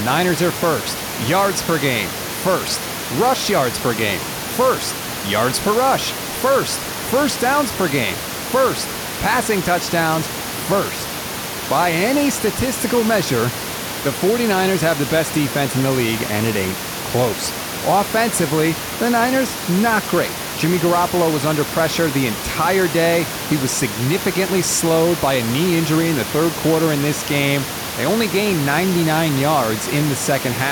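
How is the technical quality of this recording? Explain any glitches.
No technical glitches are audible.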